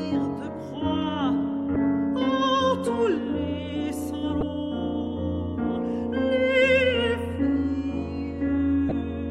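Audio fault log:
1.73–1.76 s, 4.39–4.43 s, 8.88–8.92 s: damaged data in a compressed stream. Corrupted frames make the decoder lose sync briefly, producing short chirps or blips.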